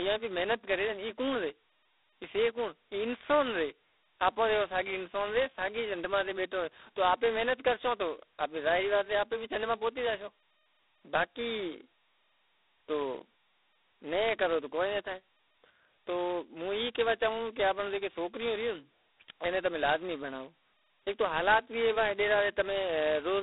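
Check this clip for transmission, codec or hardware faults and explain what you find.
One codec fault runs through the whole speech recording: G.726 ADPCM coding at a very low rate. From start to finish the sound sits in a telephone band of roughly 250 Hz to 3.7 kHz, with nothing above 3.9 kHz. G.726 sends only a few bits per sample, describing the error of an adaptive predictor, and the depth of damage here points to the 16 kbit/s mode, which uses 2 bits per sample. That coarse quantisation produces a harsh, rasping hiss that rises and falls with the speech level. Plain band-limiting would dull the speech without that grit. A frame-based codec would more likely produce warbling or metallic artefacts than this level-tracking rasp.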